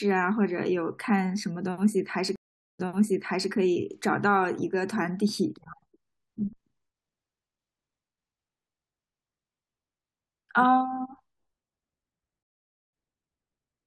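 Speech with two stream reconnect faults: at 2.36 s a 435 ms gap, then the decoder restarts 720 ms earlier, repeating audio; at 12.43 s a 497 ms gap skips roughly 300 ms ahead. Both show as flat silent waveform blocks with blank spectrogram columns and a soft onset.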